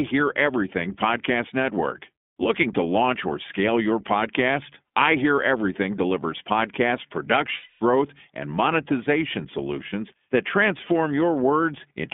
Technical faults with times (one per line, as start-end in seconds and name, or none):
0.00-12.13 iLBC codec
7.56-7.82 lost iLBC frames